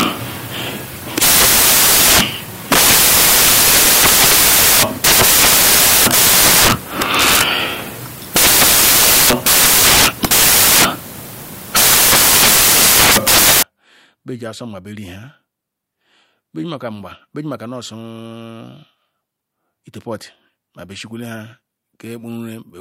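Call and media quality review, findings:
Samples built from the wrong bytes, 0.00–13.63 s: loud broadband noise replacing the speech. Decoder byte order or alignment is off, promoting the low bits.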